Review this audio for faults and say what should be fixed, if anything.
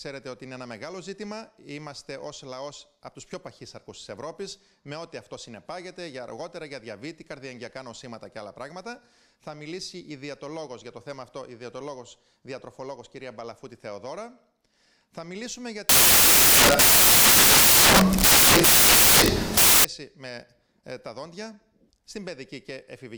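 From 15.89 s to 19.85 s the audio turns into loud, harsh broadband noise. This is samples built from the wrong bytes. The reader assembled each sample incorrectly, likely by being off by one byte or swapping byte order. The rapidly changing low bits ended up as the large part of each value. So the signal becomes harsh broadband noise. The section should be re-decoded from the source. To prevent it, check the byte order and sample alignment before reading.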